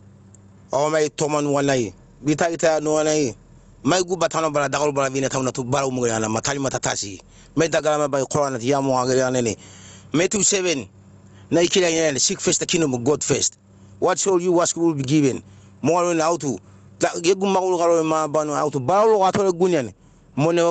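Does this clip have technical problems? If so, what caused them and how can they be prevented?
Yes. Gain pumping runs through the whole speech clip: loud and soft parts are squashed closer in level, a swing of around 15 dB. The likely cause is input gain set far too high, with a fast limiter clamping each peak. Keeping the microphone gain lower and the limiter slower would prevent it.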